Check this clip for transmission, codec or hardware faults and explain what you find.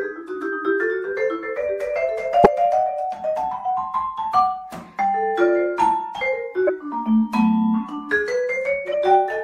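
Three short bursts of damaged data in a compressed stream occur at 2.44–2.46 s, 6.67–6.70 s and 8.92–8.94 s, each about 20 to 26 ms long. Corrupted bytes make the decoder misread the frame, lose sync and hunt for the next valid header, so each burst sounds like a brief chirp, squawk, click or short hole in the audio. On a spectrogram each appears as a narrow vertical disturbance; the waveform shows an abrupt glitch or discontinuity there.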